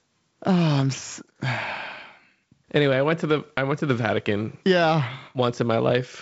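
Speech carried over wideband G.722 telephone coding, with nothing technically wrong with it.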